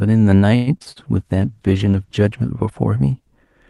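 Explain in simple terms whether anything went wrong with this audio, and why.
Between 0.55 and 0.98 s the speech turns choppy and robotic. That is repeated packet loss. Four bits of audio went missing in quick succession, the longest about a tenth of a second. The call patched each hole by stretching the last sound, so about half of that stretch is filler.

From 1.18 to 2.58 s the speech sounds rougher and more muffled. That comes from a call bitrate drop. The connection looked weaker, so the call squeezed the sound into far fewer bits. It stayed at its worst for about 1.3 seconds before recovering.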